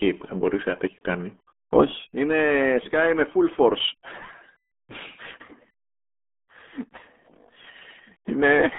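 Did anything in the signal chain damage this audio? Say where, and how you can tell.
Yes. Throughout, the speech sounds heavily muffled and gargly, with nothing above 3.7 kHz. This is codec-stage damage from the RealAudio 14.4 codec, which fits an 8 kbit/s stream.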